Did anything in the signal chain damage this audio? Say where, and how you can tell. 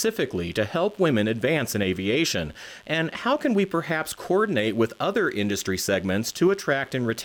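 Yes. A steady, raspy mains buzz runs under the speech from start to finish, sitting well below it but never letting up. It comes from the analogue wiring: sharp switching spikes from a dimmer, rectifier or poor shielding, repeating twice per 50 Hz cycle, spread harmonics high into the kilohertz range.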